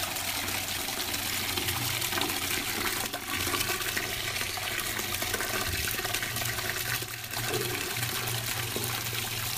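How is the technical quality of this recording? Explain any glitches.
The recording has two brief glitches of the same kind. At 3.07 to 3.29 s and again at 7.03 to 7.36 s, the level suddenly falls by about 6 dB, then snaps back. The likely cause is one channel dropping out. Shared content loses half its contribution, and anything unique to that channel vanishes.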